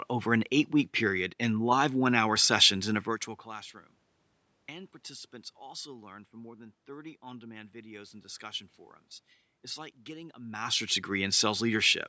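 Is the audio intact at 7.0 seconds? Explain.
Yes, the speech at 7.0 seconds is intact, with no technical fault at that moment.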